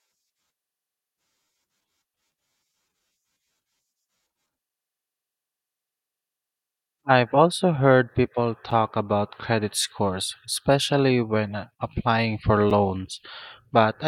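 A gap between stream segments opens at 8.71 s and again at 12.70 s, 4 s apart, matching the segment length. Each join's timestamps leave a hole, so the player inserts silence, about 8.6 ms and then 6.3 ms, heard as a brief, hard-edged dropout in the speech.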